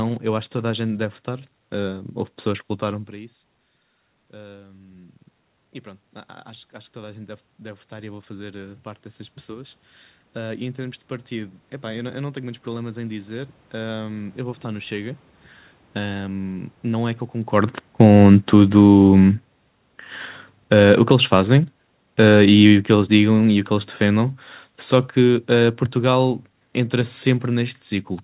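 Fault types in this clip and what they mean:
Automatic gain rising: the gain control heard too little level and slowly turned itself up, so speech and room noise swell together. It climbs about 5 dB over 1.87–5.19 s, then about 13 dB over 6.46–16.73 s after the input dropped about 21 dB.
Automatic gain falling: the reverse move. The control hears too much level and eases its gain down gradually. From 17.76 s, just after the talker moves, the speech starts out loud and then sinks along with its background right to the end.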